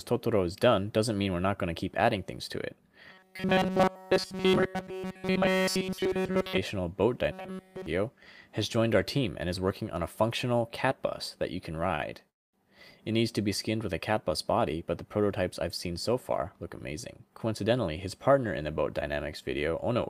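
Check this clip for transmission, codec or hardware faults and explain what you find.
Four transmission faults are audible, all from audio arriving too late or unevenly for playback.

Robotic sound from repeated short buffers, 3.10 to 6.58 s and 7.32 to 7.86 s: a rigid metallic buzz at 188 Hz, likely from roughly 5.3 ms of audio looped almost entirely.

Short stall from a late packet, 11.95 to 12.02 s: the last sound is held for 40 ms while the buffer waits, with nothing lost.

Call audio freeze, 12.29 to 12.56 s: likely an emptied jitter buffer; 240 ms is inserted, mostly 230 ms of silence, before playback resumes without loss.

Jitter buffer speed-up, 15.87 to 18.30 s: about 150 ms of pitch periods are trimmed, so the sound runs at 106% speed with unchanged pitch and feels hurried.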